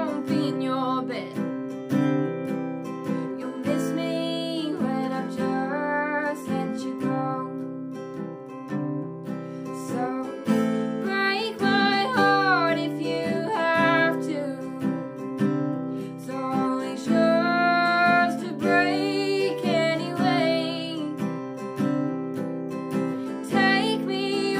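Nothing goes wrong anywhere in the clip, so there's no problem to point to at any moment.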